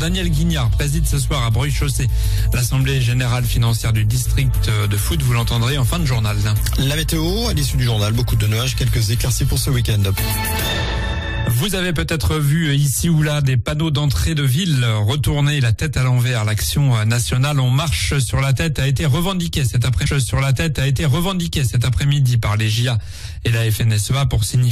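At 20.05 s a stream segment is repeated: the player queued the same two-second chunk twice, so 20.05 to 22.05 s replays after a small blip, unlike a brief stutter.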